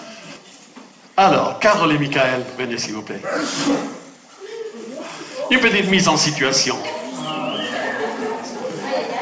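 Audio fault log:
0.36–0.38 s, skip ahead: playback lurches forward with no inserted gap or fill, and roughly 0.4 s of audio is simply absent, the material before and after the jump butted together almost directly. This points to a stretch being dropped in transit, or discarded by the jitter buffer as it overflowed while later audio was already queued, cutting the buffered delay by about 0.4 s. The call path's band limit, nothing above 8 kHz, fits G.722 at 64 kbps.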